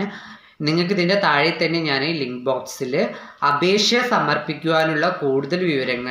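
The audio carries word clock ticks from 0.93 s through to the end at 6.09 s: about five sharp clicks, one roughly every 1.5 s, each a single-sample slip. The receiving device is free-running rather than locked to the sender's clock, with a mismatch of around 20 ppm, so one sample is periodically dropped or repeated. On a spectrogram each tick is a thin vertical broadband line. Zoomed in on the waveform, it is a one-sample step or spike breaking the trace.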